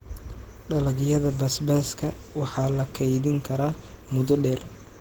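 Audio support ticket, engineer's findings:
Speech hoarse and slightly robotic throughout, whole 5 s clip. Grainy, coarsely quantised texture; band still extends to about 20.2 kHz. Probable component: Opus voice compression in hybrid mode, SILK predictive coder below 8 kHz plus CELT layer above. Excitation coded sparsely at low rate. Damage level fits around 16 kbps with 20 ms frames.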